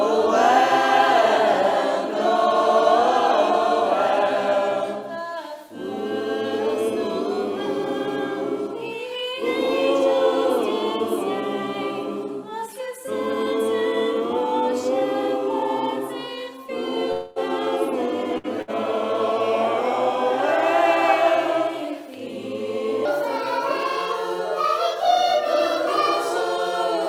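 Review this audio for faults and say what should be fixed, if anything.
From 17.12 to 17.39 s the audio stops arriving and about 240 ms is lost, most likely to a long network dropout. The receiver extends the last sound as a buzz or hiss that fades across the whole gap, then playback resumes further on without the missing stretch. A larger jitter buffer and a more stable network path would keep a gap this long from reaching playback.

Two bursts of packet loss follow, at 18.38 to 18.47 s and 18.62 to 18.71 s, each dropping about 60 ms. In each, the receiver holds the last sound and lets it fade, then skips ahead, so the material in between is missing. Forward error correction or redundant packets would recover short bursts like these.

From 23.05 s to the end, a section at the wrong speed plays at 1.34 times normal rate. Pitch rises by about five semitones along with the tempo, so the sound turns high and hurried. 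The likely cause is playback or editing against a mismatched clock. Checking that sample-rate and clock settings agree across the chain would prevent this.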